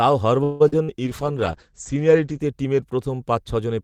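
At 0.43 s the speech stalls and the last sound is drawn out as a fading buzz until 0.62 s, with no drop to silence. This call audio freeze was likely caused by packets held up in transit while the jitter buffer ran dry. About 167 ms of filler was inserted, and the speech then resumes where it stopped, with nothing lost but now running about 0.17 s later. That separates it from the dropouts that follow, where real audio goes missing.

Short concealed packet loss occurs twice, from 0.68 to 0.74 s and from 0.84 to 0.90 s. Each time about 40 ms of speech never arrived. The decoder patched the hole by extending the preceding sound, then crossfaded back into the real signal. Each patch is heard as a brief smear or wobble rather than a stretched buzz. The timing stays the same, but whatever was in those 40 ms, such as a short consonant, is gone.

From 1.05 to 2.46 s there is a call bitrate drop. 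The encoder's budget fell from 40 to 12 kbps and stayed at its lowest for about 1.35 s. The coarser coding makes the speech rough and watery, and the audio bandwidth shrinks from 20 kHz to 8 kHz, so the top of the sibilance and the air disappear. Unlike the brief glitches before it, this is a sustained change in tone over more than a second, not an interruption.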